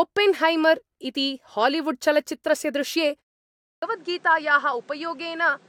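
At 3.37 s, just after "इति हालीवुड्चलच्चित्रस्य दृश्ये", a silence of about 80 ms gives way to duller, slightly quieter speech with nothing above 9.8 kHz and a new noise floor, likely an input switched to a poorer device. At 3.65 s, after a 0.51 s pause, the next sound starts abruptly with its first 0.17 s missing, a clipped start after a pause as the output device wakes.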